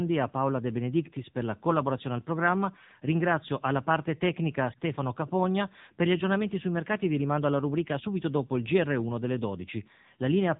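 Speech run through the AMR narrowband mobile codec the whole way: nothing above 3.8 kHz, plainly buzzy and synthetic, which fits a low mode around 8 kbps.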